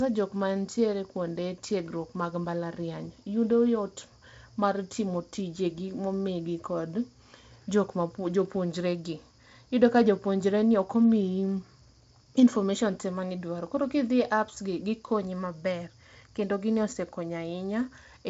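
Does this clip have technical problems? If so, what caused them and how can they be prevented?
No, this clip has no technical problems, so there is nothing to prevent.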